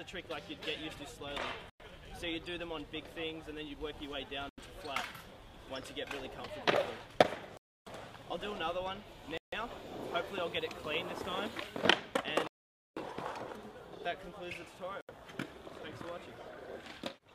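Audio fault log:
1.70, 4.49, 7.57, 9.37, 12.47 and 15.01 s, Bluetooth stall: the sound cuts to silence for 0.10, 0.09, 0.29, 0.15, 0.49 and 0.08 s, then resumes, likely because interference delayed packets and the headphone buffer ran dry. The waveform shows flat gaps, and the spectrogram shows blank vertical bands.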